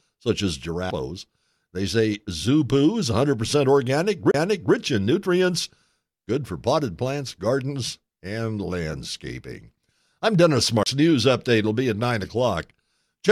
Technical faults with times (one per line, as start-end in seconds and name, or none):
0.90 CD skip
4.31-4.34 CD skip
10.83-10.86 CD skip